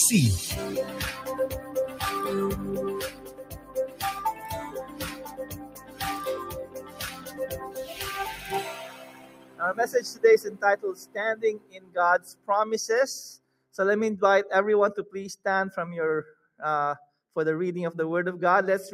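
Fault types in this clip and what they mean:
noise suppressor applied to music or sounds: A speech-oriented noise suppressor stays active across the whole clip and treats sustained content, ambience and reverb as noise to be removed. Its gain swings by roughly 20 dB, so level keeps shifting with the material rather than with any noise floor. Transients pass largely intact while held portions and decays are pulled down, giving the audio a pumping, fluttering and thinned character throughout.
sound cut by the noise suppressor: Specific stretches are misjudged as noise and attenuated well below their surroundings, by up to about 11 to 13 dB. The longest runs from 3.04 to 7.96 s, with shorter dips at 0.8 to 2.02 s, 8.86 to 9.6 s, 11.0 to 12.48 s, 13.38 to 13.73 s and 16.34 to 17.35 s. Steady and fading material sinks or has its tail truncated, while sharp onsets still come through.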